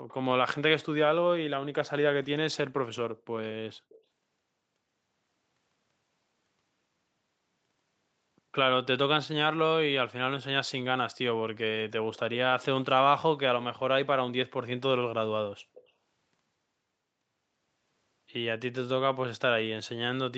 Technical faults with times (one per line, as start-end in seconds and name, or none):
0.08-0.14 echo leak
3.89-3.98 echo leak
15.74-15.89 echo leak